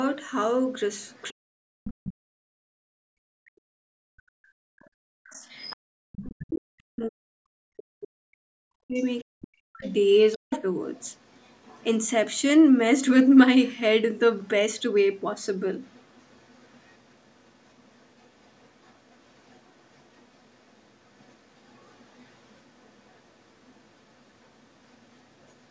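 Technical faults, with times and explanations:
1.03–2.11 s, 5.27–6.58 s, 9.19–12.4 s, 13.66–13.72 s and 14.81–25.67 s, other side's voice leaking through: a faint second voice sits behind the speech, about 20 dB down early and about 35 dB down later, likely loudspeaker echo the canceller missed.
1.29–10.51 s, speech suppressed in double talk: the talker's voice sinks deeply, about seven seconds in all, likely because both sides talked at once and the canceller ducked everything.
2.61–2.67 s and 5.77–5.93 s, background gated by the echo canceller: the room sound drops out abruptly by about 40 dB, because the canceller clamped the microphone while the loudspeaker played.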